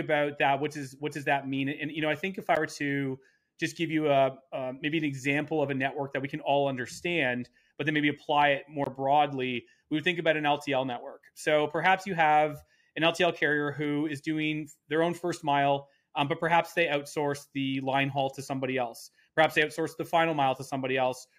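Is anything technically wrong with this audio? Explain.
Yes. There are two blocks of digital silence: a brief one at 2.55 s lasting about 12 ms, and a longer one from 8.84 to 8.86 s lasting about 23 ms. In each, the output was replaced by zeros, which fits the program failing to fill its buffer in time; the second gap, at 1024 samples, is twice the 512 samples of the first. The sound cuts to silence and back abruptly, so the first is heard as a tick and the second as a short hole.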